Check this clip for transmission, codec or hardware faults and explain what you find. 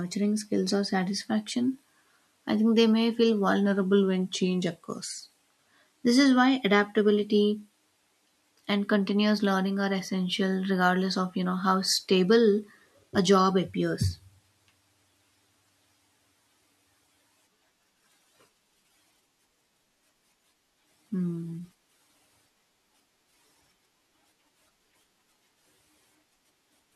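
One fault stands out, a drift correction step. From 3.66 to 5.87 s, right after "think they may feel", the speech abruptly slows by 5.9% and sinks about a semitone (105 cents), then snaps back to normal. Likely cause: clock-matching software shifting playback rate in one jump to rebalance its buffer.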